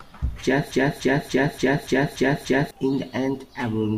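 From 0.72 to 2.71 s, a broken-record loop replaces the speech. A 289 ms fragment repeats seven times. A stalled player or stream is the likely cause.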